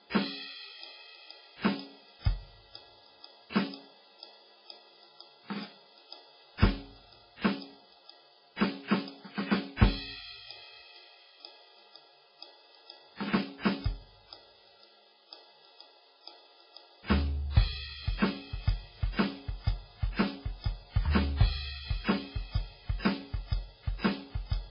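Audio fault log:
Throughout, MP3 compression: heavy watery swirl, nothing above 5.2 kHz, likely a bit-starved encoder near 16 kbps; unlike plain low-pass filtering, weak frequencies flicker frame to frame.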